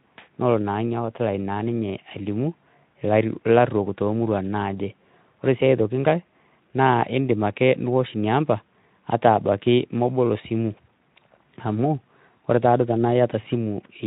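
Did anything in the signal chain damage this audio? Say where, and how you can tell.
No, nothing along the chain has done any real harm to this speech, and the Speex encoding it went through at about 15 kbps leaves only a light touch on the sound.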